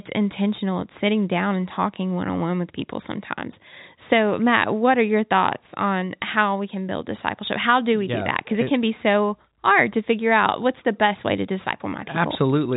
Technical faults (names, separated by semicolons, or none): none